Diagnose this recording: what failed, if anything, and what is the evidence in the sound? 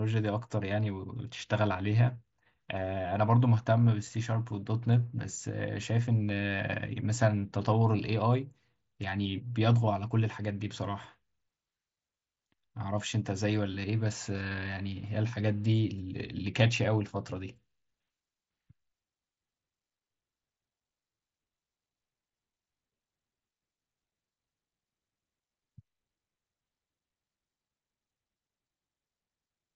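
Concealed Bluetooth headset packet loss at 4.50 s, on the wireless link between headset and phone. One brief dropout of about 7.5 ms, which fits a single lost mSBC frame, was patched by the receiver repeating the best-matching recent stretch of waveform, so the speech barely shows a seam.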